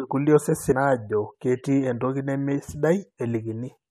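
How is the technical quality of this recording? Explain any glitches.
The recording has two brief glitches from damaged data in a compressed stream, at 0.71 s and 3.17 s. Corrupted bytes in the encoded speech make the decoder misread those frames and lose sync until it finds the next valid frame header. Each one is heard as a short chirp or blip interrupting the speech.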